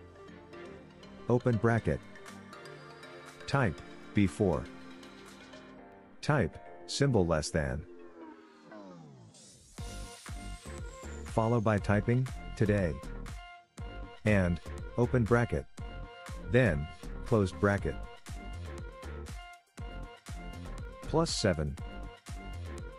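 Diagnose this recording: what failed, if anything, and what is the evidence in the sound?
A regular click recurs every 1.25 s from 0.94 s to 22.1 s, about twenty in all. This is likely clock drift buffer slips at the driver or buffer stage: two clocks differing by roughly 150 ppm force a handful of samples to be dropped or repeated each cycle.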